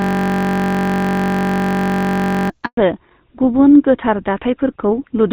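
A system hang loop is already under way when the audio begins and lasts until 2.5 s. The computer or driver has frozen while the sound hardware keeps replaying one 21.33 ms stretch of its ring buffer, which fits a 1024-sample buffer. That tiny fragment repeats exactly, producing a steady buzz at about 47 Hz.

From 2.65 to 2.77 s there is a handover gap. The call is switched from one network to another and no speech frames arrive during the change, so the sound fades out quickly and stays silent for 120 ms until the new link starts carrying audio.

From 2.77 s to the end the call falls back to narrowband. The HD Voice wideband link is replaced by an older narrowband codec. Nothing above 4 kHz remains, so the speech turns duller and rougher, with its crisp upper detail cut away.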